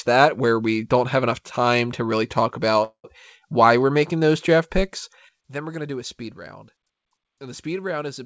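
From 2.84 to 3.06 s, packets were likely held up in transit until the jitter buffer ran dry, causing a call audio freeze. The last sound is stretched into a fading buzz ending in about 90 ms of silence. The speech then resumes where it stopped, nothing lost but everything after it 0.2 s later.

At 5.29 s a sudden gain jump drops the digital level by about 12 dB in a single step with no ramp. The speech and its background noise fall together and stay at that lower level through to the end.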